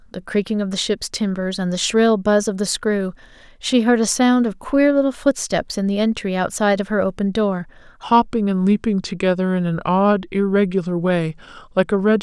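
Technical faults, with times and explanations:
8.03 to 12.22 s, section at the wrong speed: the speech turns deeper and slower, running at 0.857 times speed and about three semitones low, likely from playback against a mismatched clock.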